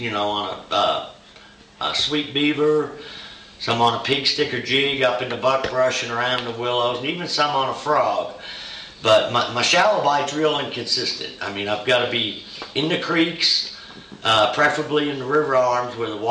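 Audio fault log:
No fault is heard anywhere in the clip. Nothing in the audio calls for a time mark or an entry in this log.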